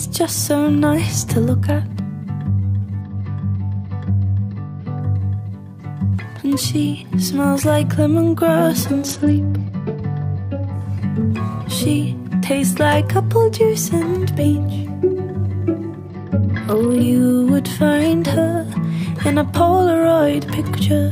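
A congested Bluetooth link forces three SBC bit pool drops, at 3.01 to 5.00 s, 9.08 to 10.73 s and 16.07 to 17.02 s. Each time the encoder cuts its bit budget, which fits a fall from a bit pool of 31 to about 10, near 77 kbps. The top sub-bands are starved and the rest coarsely quantised, so the audio turns dull in the treble and gritty until the rate recovers.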